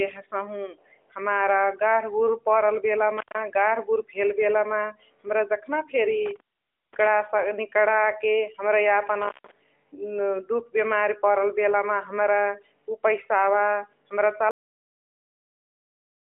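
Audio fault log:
3.17–3.38 s, 6.26–7.07 s, 9.22–9.51 s: intermittent contact. The speech drops out three times, for about 140 ms, 528 ms and 154 ms, with crackle at each edge and only faint hiss while the line is open. This is a loose cable or plug briefly losing connection. The arcing contact produces the crackle as it breaks and remakes, and the signal is gone between those points.
14.51 s: cut-off end. The audio stops abruptly in the middle of a sound and falls straight to digital silence, with no decay, for the remaining two seconds or so. The final buffers were never written or played out, so the waveform is truncated rather than faded. This is an unclean stop in the recording or playback chain rather than the talker finishing. The speech reaches this point through a narrowband mobile path with nothing above 3.6 kHz, which fits AMR-NB at 12.2 kbps.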